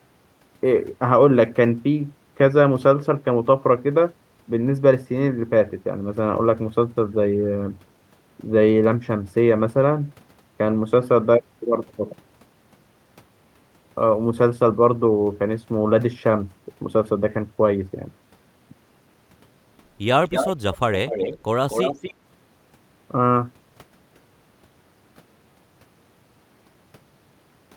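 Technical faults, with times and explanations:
20.28–20.48, 20.74–20.78, 21.07–21.38 and 21.69–22.13 s, echo leak: a delayed copy of the speech trails it by about 246 ms, sometimes nearly as loud, sometimes faint, likely from a far-end echo canceller letting loudspeaker pickup through.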